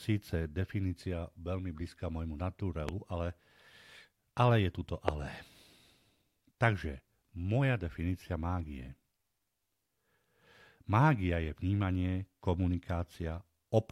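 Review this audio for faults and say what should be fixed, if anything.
Two loud pops interrupt the speech, at 2.89 to 2.91 s and 5.08 to 5.11 s, peaking roughly 15 and 20 dB above it. A voltage spike, likely from a plug, switch or static discharge, hit the signal. Secure connections and ground the equipment before recording.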